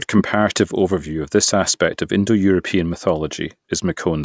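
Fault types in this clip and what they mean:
Nothing stood out as a fault on listening to this speech recording.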